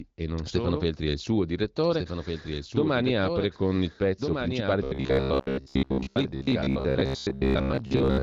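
Speech, with its band stopping near 7 kHz as fits AMR wideband coding, carries a doubled audio track throughout. The same signal was likely captured a second time by a slower path, so a full-band copy about 5 dB quieter trails roughly a second and a half behind, with no decay or room colour. From 4.84 s, just after "con il pezzo principale", to the end at 8.23 s, new audio likely arrives too seldom, and the last short buffer is replayed to fill the gaps. This robotic sound from repeated short buffers skips most of the real audio and imposes a rigid 66.8 Hz metallic buzz, which points to a buffer of about 15 ms.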